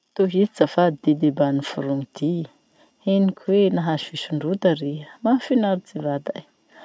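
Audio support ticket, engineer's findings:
No faults found in speech.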